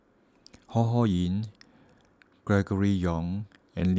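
No technical faults are audible.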